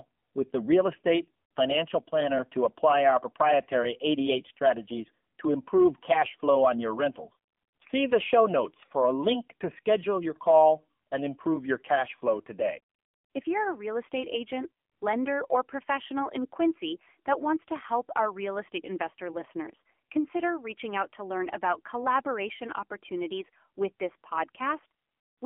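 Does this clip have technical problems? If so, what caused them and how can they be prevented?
Yes, AMR narrowband mobile codec damage runs throughout: speech squeezed into a 200 Hz to 3.4 kHz band, sounding buzzy and synthetic, which fits a low rate near 7.4 kbps. Record locally or use a wideband path instead.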